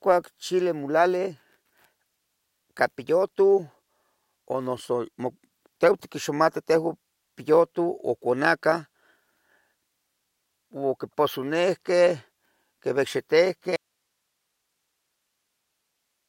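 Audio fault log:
13.76 s to the end: audio dropout to a faint residue. The speech cuts off abruptly and does not return. Only faint hiss remains, roughly 55 dB below the speech. The likely cause is a lost signal feed while the downstream path stayed live.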